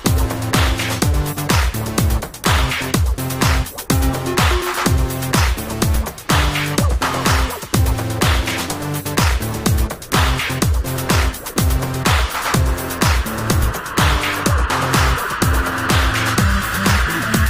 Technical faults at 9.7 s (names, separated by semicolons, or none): none